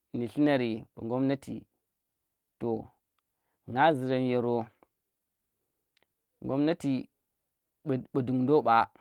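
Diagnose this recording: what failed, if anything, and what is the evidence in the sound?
Nothing failed; no fault heard.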